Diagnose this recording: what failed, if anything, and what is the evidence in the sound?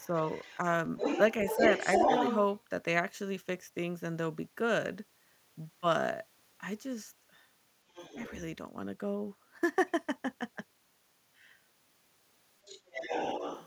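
The call's echo canceller likely left residue, so the other side's voice leaking through sounds at 0.0–0.57, 0.97–1.21, 1.46–2.36, 7.9–8.32 and 12.65–13.66 s, sometimes as loud as the speech.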